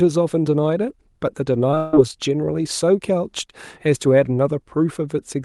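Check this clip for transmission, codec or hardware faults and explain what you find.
Two kinds of transmission fault cluster between 1.71 and 1.94 s in the speech, which reaches the ear through an Opus call path with its highs stopping near 12 kHz.

Short concealed packet loss at 1.71 s and 1.75 to 1.77 s: about 10 ms never arrived, and the decoder extended the preceding sound. This gives a brief smear or wobble, visible as a smoothed, repetitive patch in the waveform.

Long network dropout from 1.77 to 1.94 s, likely a stalled network stream: roughly 150 ms was replaced by continued synthetic sound. The result is a fading buzz or hiss, with blurred, decaying energy on a spectrogram rather than a gap.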